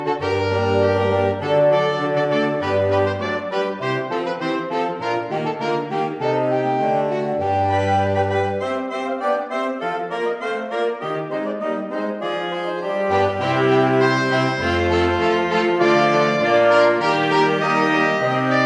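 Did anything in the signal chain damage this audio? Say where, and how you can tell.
No, nothing in the signal chain can be heard damaging this audio. At no point does any stage between capture and playback leave an audible mark on the sound.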